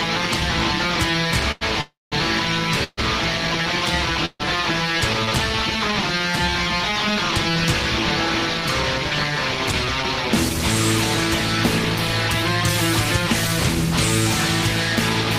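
The audio has three kinds of delivery fault. At 1.51 to 1.63 s, a short stall from a late packet emptied the jitter buffer, so the receiver stretched the last sound for about 96 ms until the packet arrived. Playback then resumed where it had stopped, with nothing lost but one sound held too long. Call audio freezes follow at 1.81 to 2.14 s, 2.84 to 2.99 s and 4.25 to 4.42 s, likely from packets held up in transit draining the buffer. Each time the last sound carries on as a fading buzz or hiss. It then falls silent, for about 200 ms in the first freeze, 40 ms in the second and 50 ms in the third, before the audio continues from the same point. These fills of 307, 138 and 141 ms insert gaps without dropping content. From 9.82 to 10.55 s a jitter buffer speed-up trims the backlog. The receiver cuts many short pitch-period pieces, around 40 ms in all, so that stretch runs at 104% speed while keeping the same pitch.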